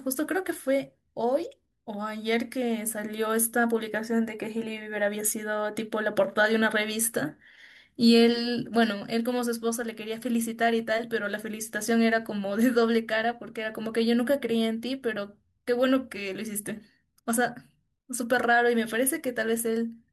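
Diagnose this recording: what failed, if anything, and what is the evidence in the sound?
Nothing failed; no stage of the chain shows an audible fault.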